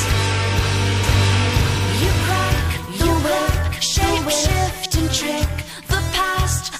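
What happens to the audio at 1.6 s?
At 1.6 s you're inside a doubled audio track that runs from about 1.04 to 4.86 s. A second, full-band copy of the sound sits roughly a second behind the original at about the same level, with no decay or room colour, and it cuts in and out abruptly at those edges. The likely cause is the audio being picked up again through a slower path, or an edit leaving two copies out of step.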